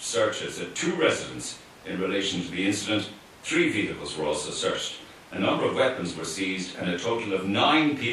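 No technical faults can be heard anywhere in this recording.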